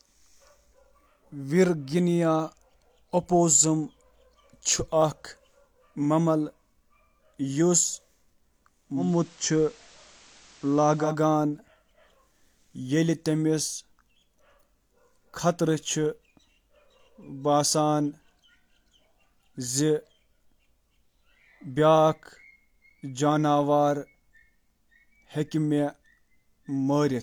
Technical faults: digital radio blending to analogue

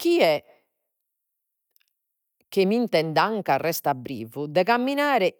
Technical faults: none

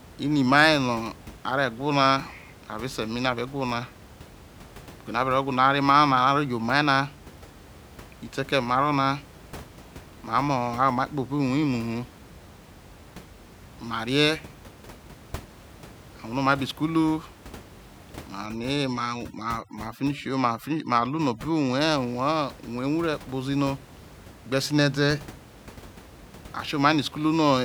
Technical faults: overdone noise removal

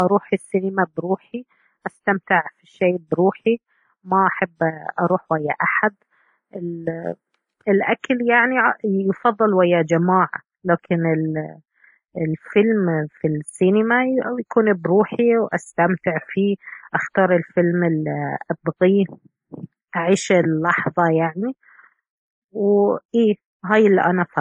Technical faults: transcoding between lossy codecs

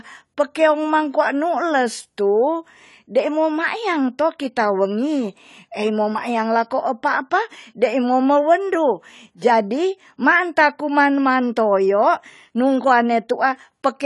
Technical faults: AAC compression

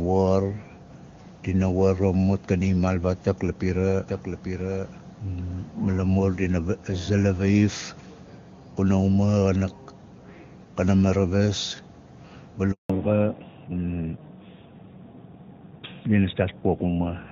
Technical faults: doubled audio track; handover gap; fallback to narrowband

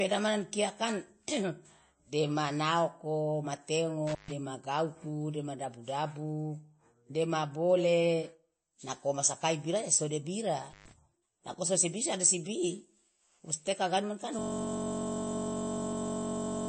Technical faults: MP3 compression; intermittent contact; system hang loop

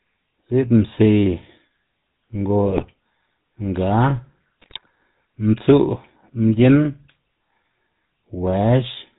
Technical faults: GSM full-rate codec; GSM bit errors

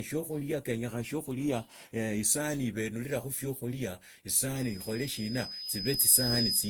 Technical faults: generation loss; loudspeaker feedback squeal

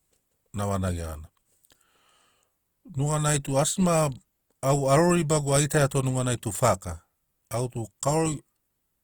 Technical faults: Opus compression

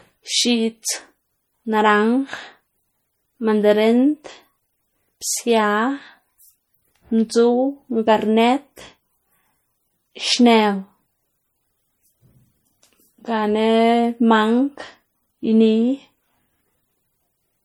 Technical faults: MP3 compression

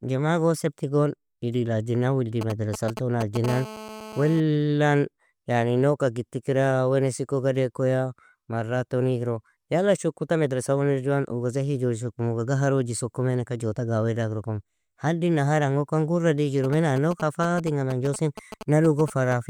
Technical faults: GSM signalling bursts; GSM phone buzz

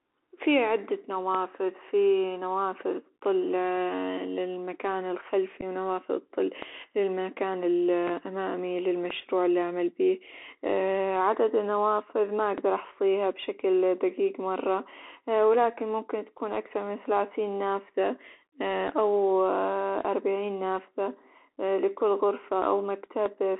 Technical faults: Bluetooth CVSD headset codec; DC step; unconcealed Bluetooth headset packet loss

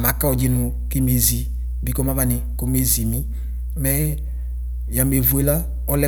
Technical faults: mains hum

